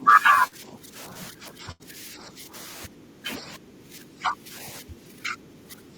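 At the very start, from 0.0 to 0.06 s, the echo canceller likely failed to fully remove the far end's loudspeaker playback from the microphone, so other side's voice leaking through is heard as a brief, faint scrap well below the speech.

Over the same opening stretch, 0.0 to 1.15 s, speech is suppressed in double talk: with both sides talking, the canceller likely turned down its own talker along with the echo, so the voice dips by about 10 dB.

Inside that stretch, at 0.47 to 0.54 s, 40 ms of packets never reached the decoder in time. The receiver extended the preceding sound to fill this short concealed packet loss, which comes across as a quick smear before the real audio returns.

From 1.31 to 2.55 s the double-talk suppression likely recurs, pulling the voice down by about 10 dB.

Within that span, at 1.71 to 1.83 s, a burst of packet loss removed 80 ms. The receiver held and faded the last sound across the gap, and the speech resumes further on with that piece missing.

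The suppression likely returns from 2.86 to 4.54 s, now dipping the voice by about 15 dB. It comes back once more from 4.81 s to the end, cutting about 20 dB at its deepest.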